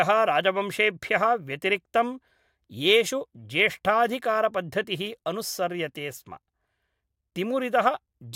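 Speech recording with no audible technical faults anywhere.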